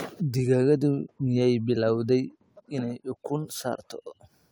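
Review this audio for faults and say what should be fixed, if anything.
Nothing here needs fixing; I didn't hear any faults in the recording, so it can stay as it is.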